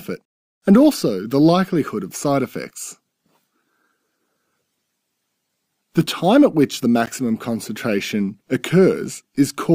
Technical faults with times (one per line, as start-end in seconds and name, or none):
7.06 block of digital silence